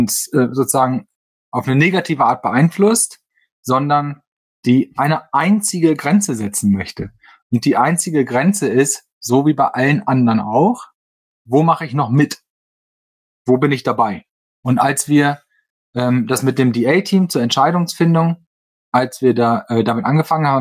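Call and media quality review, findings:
No audible faults found: no dropouts, clipping, glitches or level disturbances anywhere in the recording.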